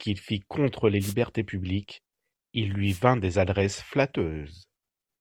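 Short bursts of static swish across the speech at 1.00 to 1.14 s and 2.86 to 3.01 s: wireless microphone noise hits, where the FM radio signal faded and receiver noise briefly broke through.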